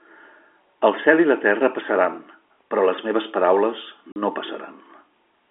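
At 4.12 s, just after "però les meves paraules", the speech drops out for 40 ms. This is packet loss filled with silence. Audio packets failed to arrive, and the receiver played nothing in their place. The gap ends at 4.16 s. Its length fits two lost 20 ms packets. The cut is abrupt at both edges. The narrow telephone band of the G.711 line stays audible around the hole.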